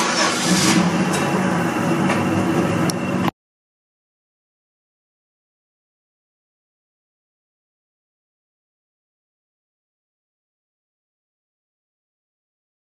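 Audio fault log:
2.68 to 2.70 s, damaged data in a compressed stream: a brief glitch lasting about 20 ms, where corrupted bytes left the decoder unable to read the affected frames, so it lost sync and resumed only once it found the next valid frame header.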